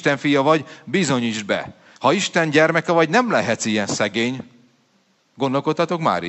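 No technical faults are audible.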